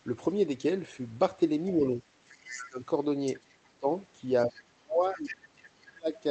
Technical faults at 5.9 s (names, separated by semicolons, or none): speech suppressed in double talk